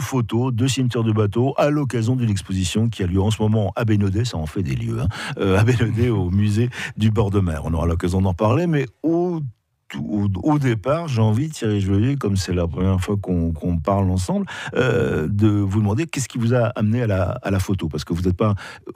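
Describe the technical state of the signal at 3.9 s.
At 3.9 s the signal is intact, with no audible technical fault at that moment.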